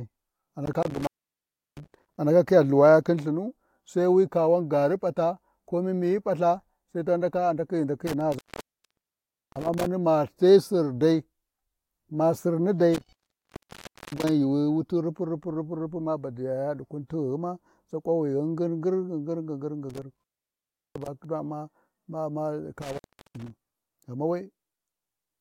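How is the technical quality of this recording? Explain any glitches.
The speech is marred by five dropouts from an intermittent contact, at 0.66–2.18 s, 8.07–9.86 s, 12.94–14.29 s, 19.90–21.25 s and 22.82–23.50 s. A loose plug or cable briefly opens the signal path, so the audio cuts out for about 0.70, 1.17, 0.99, 0.72 and 0.37 s respectively, with crackle as the contact breaks and remakes and faint hiss in the gap. The first ends just before "andaka khiya", the second just before "ma dai".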